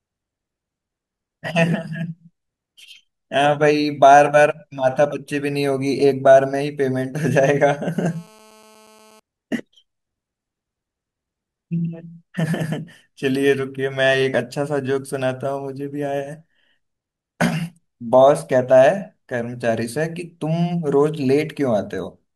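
From 7.96 to 9.20 s, GSM phone buzz sits under the speech. A nearby 2G phone on a call pulses 216.7 times a second, and the audio circuit rectifies those bursts. It sounds like a steady, raspy, harmonic-rich buzz, about 30 dB below the speech.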